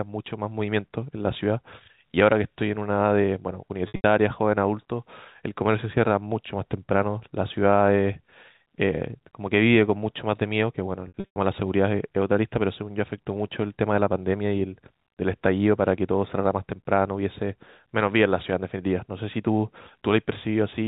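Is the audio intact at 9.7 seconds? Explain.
Yes, at 9.7 seconds the speech passes intact through the G.711 telephone coding with no fault present at that moment.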